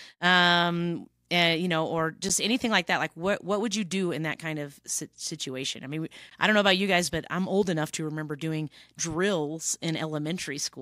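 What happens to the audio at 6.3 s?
Right after "of situation I mean", at 6.30 s, there's a gap between stream segments: about 15 ms of hard-edged silence where the timestamps of two segments don't quite meet, then "I don't know about" picks up cleanly.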